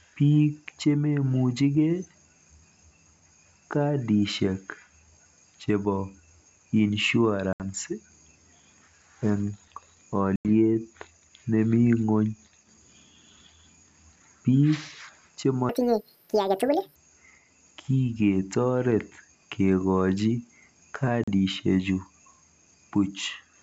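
Speech carried over G.722 wideband telephone coding, clear up to about 7 kHz with at most a faint upper-band hiss. Packet loss on an ADPCM call cuts hard-edged silent holes at 7.53 to 7.63 s, 10.36 to 10.49 s and 21.24 to 21.28 s, losing 70, 90 and 40 ms. After each gap the decoder's predictor and step size no longer match the sender's. The speech returns with brief, slight distortion. From 15.69 to 16.96 s a section plays at the wrong speed, twice as fast. Pitch rises together with tempo, by about ten semitones, so the speech sounds high and hurried. The likely cause is that this stretch was played or edited against the wrong clock.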